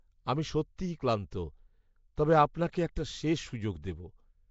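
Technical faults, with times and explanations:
Throughout: Nellymoser compression, likely from the Nellymoser Asao codec used for Flash microphone audio, at a level that points to roughly 32 kbps. The speech has a rough, hissy halo and a smeared, underwater character. The codec works in short fixed blocks with a tight bit budget, so weaker spectral bands get no bits and are filled with synthetic noise. The damage is plainly audible, and nothing remains above 7.7 kHz.
1.31 s, 2.16 s and 2.72 s (just before "একটা শেষ"): pre-echo. Each of these sharp onsets is preceded by a brief hiss, spreading about 10 ms, 16 ms and 15 ms ahead of the attack, and the attacks sound softened. The transform codec spreads quantisation noise evenly across each block. When a loud transient lands late in a block, noise sized for that loud moment also fills the quiet stretch just before it.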